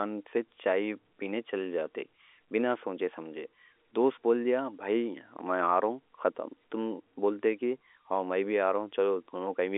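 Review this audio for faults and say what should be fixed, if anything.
No faults; nothing to fix.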